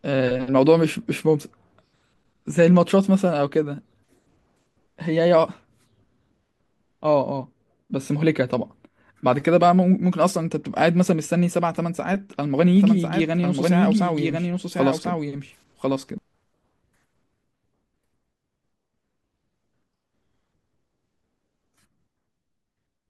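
Doubled audio track, 12.76–16.18 s: a dry speech copy, likely from a slower second capture path, trails around a second behind, about 5 dB quieter, starting and stopping abruptly.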